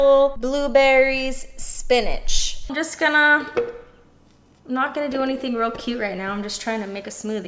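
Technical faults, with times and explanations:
Nothing stood out as a technical problem on listening to the recording.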